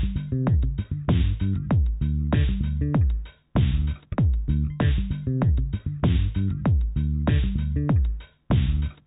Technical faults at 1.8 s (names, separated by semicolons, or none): none